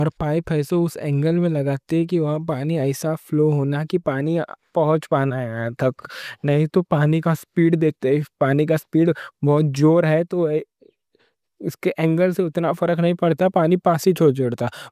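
No technical faults can be heard anywhere in the recording. The speech comes through steadily, with no dropouts, clicks or sudden changes in level along the way.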